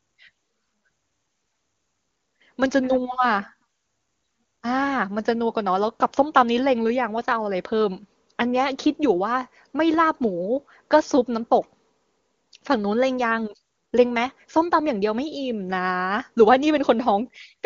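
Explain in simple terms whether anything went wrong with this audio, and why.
Nothing went wrong here: the speech was carried by the HD Voice phone codec at its highest quality setting, where any trace of the coding is faint at most.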